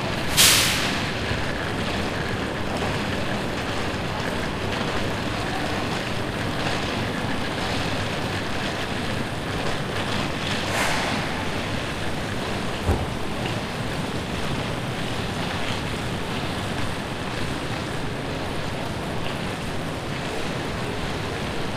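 A steady train of ticks runs from 0.11 s to 21.68 s, one every 64 ms, heard only where there is sound. These are periodic USB or driver dropouts: the audio path stalls at a fixed interval, silencing about a millisecond each time.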